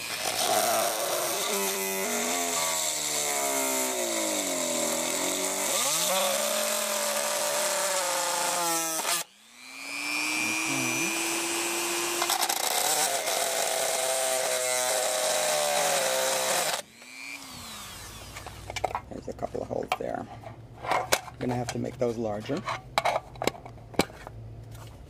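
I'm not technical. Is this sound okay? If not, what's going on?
Yes, this sound is okay, and there's nothing going on that needs fixing.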